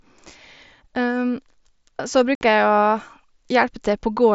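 At 2.35 s the speech drops out for about 60 ms in an unconcealed Bluetooth headset packet loss. Several consecutive packets never arrived over the mSBC link and nothing filled the gap, so a hard-edged silent hole shows as a flat waveform and a blank vertical band on the spectrogram.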